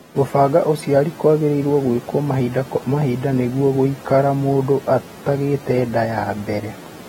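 From start to finish, the speech carries plainly audible coding damage, likely from AAC compression at a low bitrate, with the sound pointing to something near 39 kbps. On a spectrogram, energy stops at a flat ceiling around 16.6 kHz, with nothing above it. The encoder quantised each frame's frequency lines coarsely to save bits, so the detail it discarded makes the speech sound smeared and dull, with audible artefacts rather than clean highs.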